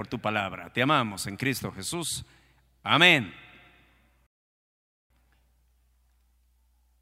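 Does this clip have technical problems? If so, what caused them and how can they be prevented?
Yes. There is a playback stall in this speech clip. At 4.27 s the audio stops in mid-flow and stays silent until 5.10 s, a gap of about 0.83 s. It then carries on. The likely cause is the player running out of buffered data, or its playback thread being blocked, so nothing reached the output until it recovered. Giving the player a larger buffer and keeping its audio thread free of blocking work would prevent this.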